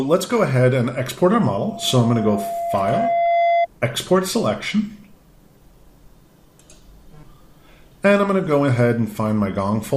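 Loudspeaker feedback squeal runs from 1.41 to 3.67 s. A microphone is picking up the loudspeaker it drives, and at 685 Hz the gain around that loop rises above one, so the tone feeds itself on every pass. It swells over about two seconds into a steady squeal that ends up roughly as loud as the rest of the sound, riding on top of it until the loop is broken at 3.67 s.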